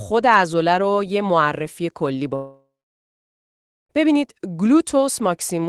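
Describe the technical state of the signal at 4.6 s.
At 4.6 s the signal is intact, with no audible fault at that moment.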